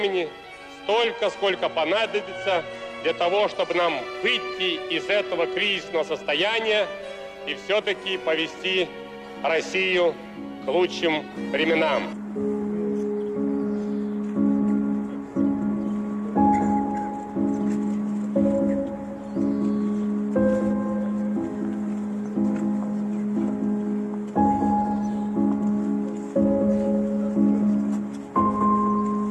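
From about 1.16 s to 3.79 s there's a Bluetooth SBC bit pool drop. The treble goes dull and a gritty, grainy noise creeps in underneath, then both clear once the link settles. What's happening is the encoder getting squeezed: with fewer bits per frame, the upper sub-bands get starved and everything else is quantised roughly. The degree of dulling fits the bit pool being cut about in half, to a rate near 108 kbps.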